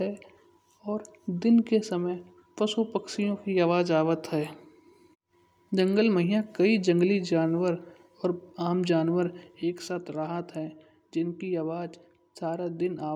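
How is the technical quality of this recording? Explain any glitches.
The recording has one clear fault, a sudden gain jump near the end. At 9.62 s, right after "आम जानवर", the level drops by about 7 dB in a single step and stays down until the clip ends at 13.15 s. The speech and the background noise fall together, with no fade between the two levels. The likely cause is a digital gain change applied from one sample to the next without a ramp, such as a new setting or a bit shift.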